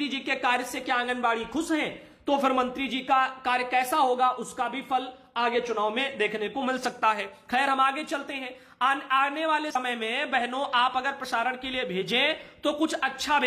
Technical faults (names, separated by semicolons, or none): damaged data in a compressed stream